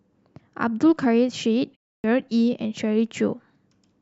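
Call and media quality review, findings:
Clipped start after a pause, 1.98 to 2.04 s: about 60 ms swallowed after a 0.3 s silence; sound resumes abruptly, onset missing. Probable component: output device or driver sleeping during silence, not awake or relocked in time.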